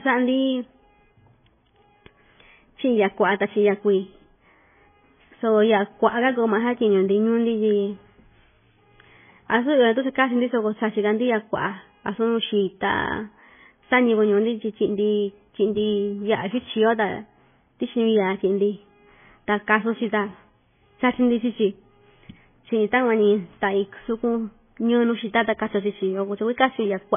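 Throughout the speech, everything above 3.5 kHz is missing, and the sound turns watery and swirly, with metallic chirps on s sounds and smeared attacks. This is likely heavy MP3 compression at a starved bitrate, consistent with 16 kbps, cutting the treble and toggling weak frequency lines between frames.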